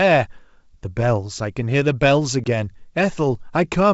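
At 2.44 s there's a short hard-edged dropout, about 20 ms, so roughly one packet lost on this ADPCM call. After the silence the decoder's predictor and step size are out of step with the sender's, so the speech comes back slightly distorted before settling, over the otherwise wideband G.722 sound.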